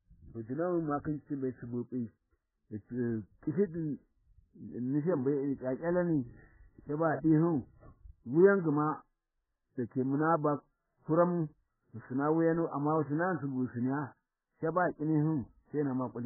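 Throughout the speech, the encoder was likely starved of bits. This is heavy MP3 compression, consistent with a bitrate near 8 kbps. Nothing survives above 2 kHz, so the sound is dull and muffled. Weak frequency lines drop in and out between frames, giving a watery, swirling texture with smeared attacks.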